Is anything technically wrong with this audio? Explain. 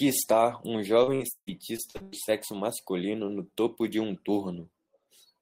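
Yes. From 1.03 to 2.30 s there is repeated packet loss (robotic sound): eight gaps, the longest 152 ms, are patched by extending prior audio, making the speech choppy.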